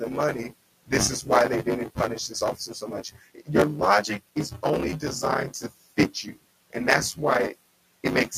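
A robotic buzz at 100 Hz runs under the speech from start to finish, which is buffer tearing. The write and read positions in the ring buffer have slipped, so around a third of each period replays audio from roughly 20 ms earlier, with hard joins at a rate that fits a 10 ms period.

Between 2.56 and 3.49 s, the noise suppressor cuts into the speech. It mistook parts of the speech for background and pulled them down by up to about 14 dB, along with the room noise sitting about 25 dB below. Around 300 ms in total sounds swallowed or faint.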